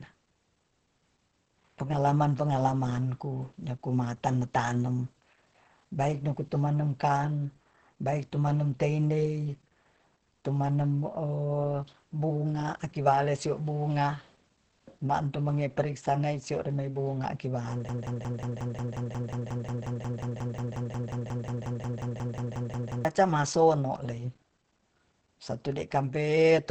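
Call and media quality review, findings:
Opus compression, throughout: muffled, hoarse speech; spectrogram shows a hard ceiling at 8.6 kHz, likely the Opus SILK speech mode at a low rate near 16 kbps.

Broken-record loop, 17.89–23.05 s: a 0.18 s fragment repeats back to back, 29 times. The waveform shows identical blocks, and the original audio is lost. Likely a stalled player or stream buffer.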